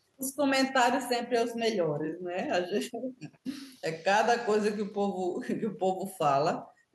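No technical faults are audible.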